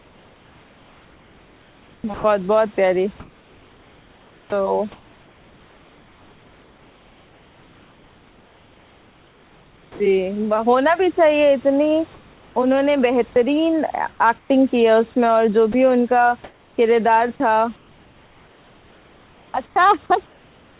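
Speech heard through a narrowband call path with nothing above 4 kHz, consistent with G.711 A-law, is chopped by the voice detector from 0 to 10 s, where about 8.5 s is replaced, and from 12.14 to 20.8 s, where about 3.5 s is replaced. The likely cause is sender-side voice detection gating syllables and word edges and filling the gaps with comfort noise, while the real room noise sits about 32 dB below the speech.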